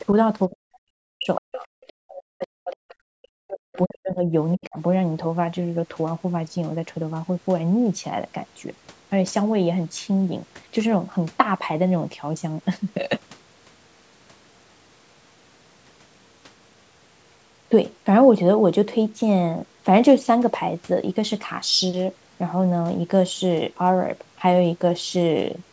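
From 0.49 to 1.66 s, 1.9 to 4.26 s and 4.55 to 4.78 s, the speech is suppressed in double talk. It drops by up to about 40 dB, leaving deep notches in the waveform and dark gaps on the spectrogram, likely from echo-canceller ducking. At 1.35 to 1.41 s the other side's voice leaks through as a scrap about 15 dB below the speech, a faint brief smear within that gap.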